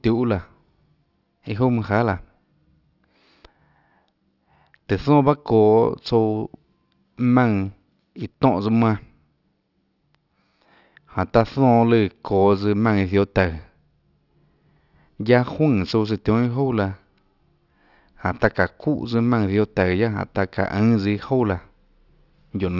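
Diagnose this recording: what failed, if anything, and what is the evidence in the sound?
Aliasing throughout, coming from the sample-rate conversion stage. Sibilants sound gritty and metallic, and the spectrum runs hard up to a 6 kHz edge. That fits a drop to 12 kHz without an anti-alias filter, so higher content folds back down, roughly 30 dB under the speech.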